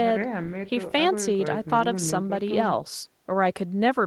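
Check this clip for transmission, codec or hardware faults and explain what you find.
Nothing in the speech recording points to a transmission, codec or hardware problem, as the signal stays continuous and steady throughout with no audible disturbance.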